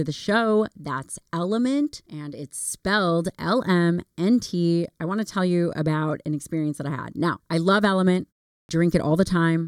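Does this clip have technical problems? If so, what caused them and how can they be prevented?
Yes, there's a clipped start after a pause at 8.61 s: after a 0.37 s gap, the output path seems to nod off and takes about 80 ms to wake back up, so the speech jumps in abruptly, missing its opening sound. Keeping the audio device awake through silences, or feeding it a low-level signal, would prevent it.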